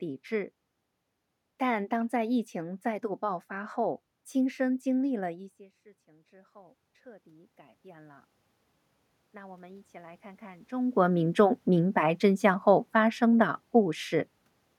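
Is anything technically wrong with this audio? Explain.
Yes. From 6.05 to 8.33 s the speech and the room noise behind it swell together by about 8 dB. This is automatic gain rising: the level control slowly turned up its gain after the input fell by about 23 dB when the talker moved back just before. From 9.32 to 10.78 s it climbs again, by about 5 dB.

From 10.94 to 14.4 s the speech and its background sink together by about 3 dB. This is automatic gain falling: after the talker moved around 10.5 s, the control found the input too loud or its background too strong and gradually pulled its gain down.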